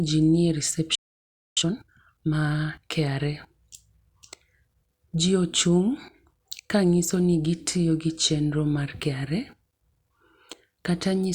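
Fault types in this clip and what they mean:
Playback stall, 0.95 to 1.57 s: the speech cuts off mid-flow and the output falls silent for 0.62 s before picking up again. The likely cause is the player running out of buffered data or its audio thread being blocked.
Time-compressed catch-up, 1.57 to 2.79 s: right after the gap the speech is hurried along at 1.5 times normal speed with its pitch unchanged, as small slices are cut out and cross-faded to clear the backlog.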